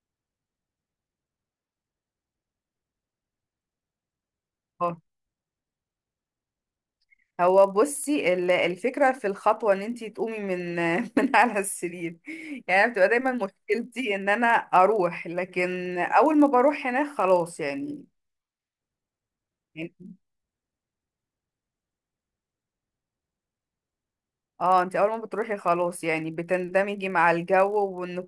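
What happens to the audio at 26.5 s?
At 26.5 s the speech carries a steady 50 Hz buzz, a rapid train of ticks heard only while there is sound, as it is across the whole clip. It comes from the resampler restarting on every block: each 20 ms block was converted from 48 kHz to 24 kHz in isolation, leaving a small error at every block edge.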